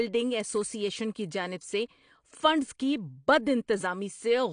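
Likely AAC compression at a low bitrate, around 32 kbps, throughout the speech: nothing survives above 9.8 kHz, leaving it dull, smeared and fizzy on sibilants.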